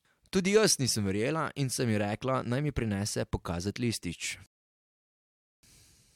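At 4.46 s the speech halts in a rebuffering stall. The player ran dry of downloaded data, leaving flat silence on the waveform and a blank spectrogram until 5.63 s, then resuming seamlessly.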